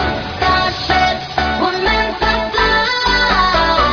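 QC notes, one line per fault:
No technical problems can be heard anywhere in the signal.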